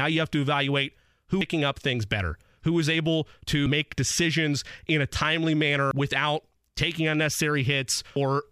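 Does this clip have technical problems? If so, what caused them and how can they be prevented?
Yes. The speech jumps abruptly at 1.41 s, between "you have to evaluate" and "up things better who", again at 5.91 s after "decisions in a timely", and at 8.16 s, each time losing roughly a third of a second with the edges butted together. This is audio missing between chunks, likely from a recorder handing off 2.5 s blocks and dropping audio at each changeover. Using overlapping or double-buffered capture, so the next block starts before the last one closes, would prevent it.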